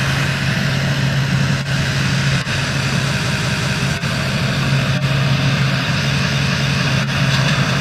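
Repeated frames occur at 1.44–1.54 s, where a 93 ms block plays once more; at 3.21–3.77 s, where a 186 ms block plays three extra times; and at 6.23–6.78 s, where a 279 ms block plays twice more. The same compressed frames were decoded again, producing an audible stutter and lengthening the audio by each repeated span.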